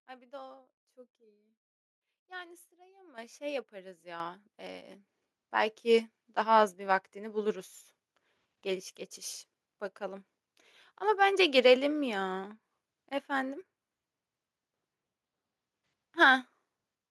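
At 3.18 s the level of the speech jumps abruptly by about 10 dB, and at 4.2 s it jumps again by about 8 dB. This is the microphone volume stepped up: the input gain was raised in discrete steps rather than smoothly. Because the change happens before any processing, the voice and the background noise rise together. Each step is heard as a sudden increase in loudness and noise floor, with no fade between levels.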